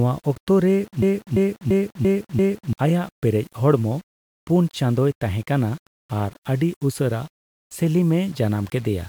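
From start to finish the speech carries a grainy, signal-following distortion: quiet passages and decaying word endings turn gritty, and the lowest-level moments sputter between adjacent steps rather than fading smoothly. The error sits around 30 dB below the signal and moves with it instead of forming a steady hiss. The likely cause is low bit depth without dither, with samples rounded to something like 7 bits, leaving coarse, correlated quantisation error.

At 1.02 s the audio seizes into a system hang loop that lasts until 2.73 s. A single 341 ms fragment repeats exactly five times, giving a mechanical stutter at about 2.9 Hz. Playback hardware kept cycling one ring buffer while the host stalled, and the loop length fits a 16384-sample buffer. Roughly one and a half seconds of the original speech is lost and replaced by the repetitions.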